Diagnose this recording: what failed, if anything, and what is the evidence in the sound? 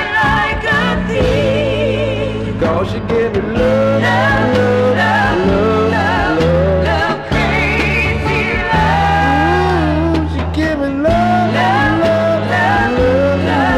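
Hard clipping throughout at a converter, number-format or other gain stage: about 6 dB overdrive flattens roughly 3% of samples, showing squared waveform tops and broadband harmonic smearing on loud spectrogram moments.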